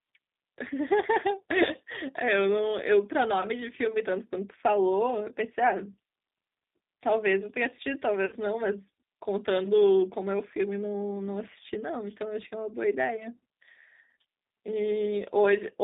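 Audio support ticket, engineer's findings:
G.729 codec on the whole call, clearly audible. Band squeezed to roughly 200 Hz to 3.7 kHz, nothing above. Rough, slightly synthetic texture from the 8 kbit/s model rebuilding the voice out of filter, pitch and a few pulses per frame.

VoIP packet loss concealed by the speech codec, 8.26 to 8.35 s. About 60 ms missing, which fits three 20 ms packets dropped. Decoder stretches the last pitch and filter into a fading buzzy tone or coloured noise, then takes a moment to recover once audio resumes.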